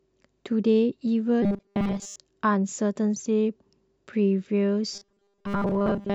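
Speech with robotic sound from repeated short buffers at 1.42–2.16 s and 4.93–6.15 s: a rigid 200 Hz buzz, likely 5 ms fragments looped over most of the audio, unlike flanging.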